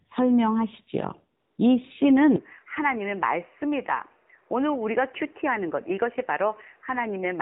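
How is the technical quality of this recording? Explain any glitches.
The recording is quite degraded, with three audible problems: mobile-codec damage throughout, a brief synthetic-noise gap, and a later drop to duller, quieter sound.

AMR narrowband mobile codec: across the whole clip, nothing passes above 4 kHz, and the voice sounds buzzy and synthetic. The phone codec rebuilds speech from a vocal-tract model and a few pulses, and this much roughness fits a low mode around 7.4 kbps. Unlike plain low-pass filtering, the timbre itself turns artificial.

AMR comfort noise: from 1.40 to 1.58 s, about 180 ms, the real background vanishes and a smooth, steady hiss switches in, then out. The codec judged the talker silent, stopped sending speech, and the receiver generated noise from a coarse spectral sketch. Unlike a dropout, the gap holds uniform noise rather than silence.

Input switched to a poorer device: from 2.36 s to the end, the sound narrows to nothing above 3 kHz, drops a few decibels in level, and gains a fresh, faint noise floor, with no silence at the change. 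The likely cause is the system changing to another microphone or headset profile. Unlike the codec's 4 kHz limit, this band is narrower, and the change comes at a single moment with its own tone and noise.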